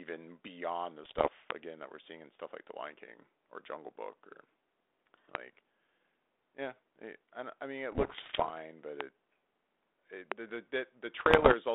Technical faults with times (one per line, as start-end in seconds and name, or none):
1.04-1.29 bit errors on an ADPCM link
1.51-1.53 loud pop
5.35-5.37 loud pop
7.92-8.51 bit errors on an ADPCM link
9.01-9.03 loud pop
10.32-10.34 loud pop
11.20-11.55 bit errors on an ADPCM link